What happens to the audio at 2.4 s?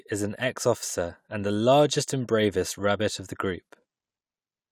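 At 2.4 s the speech runs on cleanly, with no dropout, click, distortion or other fault.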